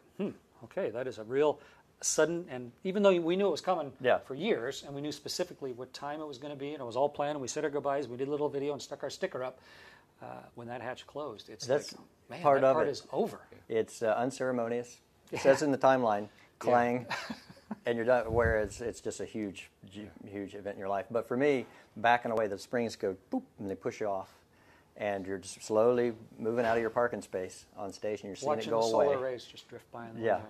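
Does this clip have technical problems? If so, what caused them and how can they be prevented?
Yes. Overlap between stream segments: adjacent 6-second segments carry overlapping timestamps, so the player discards real sound and leaves tiny skips at 4.39, 22.37 and 28.35 s. Aligning segment timestamps exactly during packaging prevents it.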